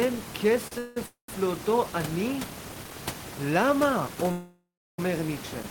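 Speech, with a sound briefly held too long from 0.67 to 0.72 s, a short stall from a late packet: the jitter buffer ran dry and the receiver stretched the last sound for 40 ms before resuming. Call audio freezes follow at 0.78 to 0.97 s, 1.06 to 1.29 s and 4.31 to 4.99 s. Each last sound is drawn out into a fading buzz or hiss, which falls to silence for about 120 ms in the second and 320 ms in the third, before the speech carries on where it stopped. This is likely packets delayed in transit emptying the buffer, adding roughly 0.18, 0.22 and 0.67 s of gap with nothing lost. Room noise sits about 11 dB below the speech.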